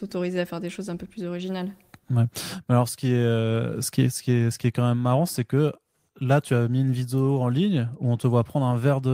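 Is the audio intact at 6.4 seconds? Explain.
Yes, at 6.4 seconds the speech plays through intact, with no dropout, click, distortion or other audible fault at that moment.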